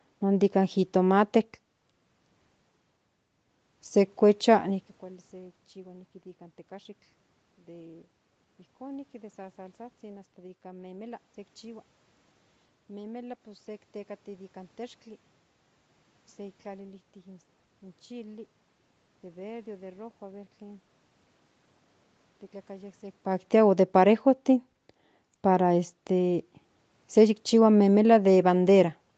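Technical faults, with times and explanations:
No technical faults can be heard in this speech recording. The sound is limited to below about 8 kHz by the call processing and codec, with room noise underneath and natural level shifts near 4.5 and 23 seconds as the talker moves relative to the microphone.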